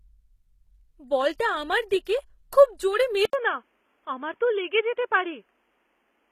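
The whole clip carries plainly audible codec damage, likely from HE-AAC compression at a low bitrate: the treble is rebuilt from copied lower bands, with nothing above 14.9 kHz.

Pre-echo shows up at 1.38, 1.89 and 2.05 s. A short smear of noise, 13 to 18 ms long, runs ahead of each sharp onset, because the codec spread its noise across the whole block.

At 3.25 s there's an 80 ms gap, then the sound turns dull and boxy through to the end. Nothing remains above 3.5 kHz, the level drops around 5 dB, and a new noise floor sits far below the speech. That's likely the input switching to a poorer device.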